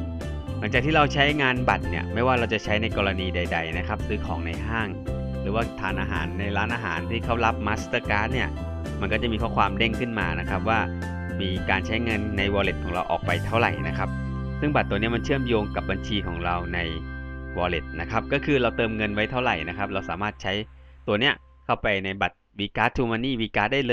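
Nothing in this one needs flagging, since the audio carries on without any interruption, glitch or odd artefact to point to.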